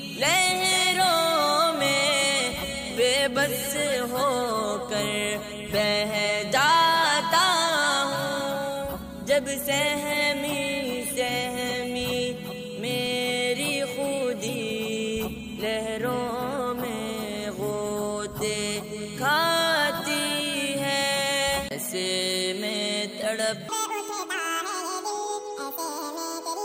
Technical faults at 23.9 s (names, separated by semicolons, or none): audio read two samples at a time (double speed)